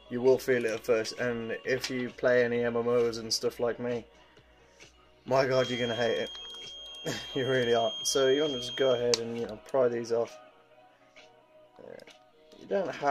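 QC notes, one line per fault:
5.47 to 9.08 s: feedback whistle. A thin, steady tone near 3.2 kHz sits behind the sound, roughly 10 dB under it. Its level swells and fades slowly but never builds. The likely cause is a loudspeaker-to-microphone loop held just at the edge of feedback.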